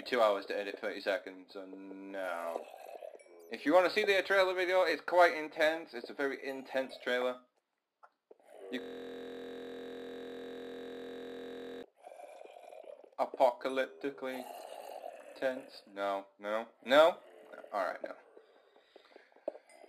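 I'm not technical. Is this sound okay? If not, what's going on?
No. From 8.81 to 11.83 s the sound freezes into a steady buzz: one tiny 23 ms slice repeats 43 times a second, 130 times over. This is a system hang loop. The computer stalled while the sound hardware kept replaying its last small chunk.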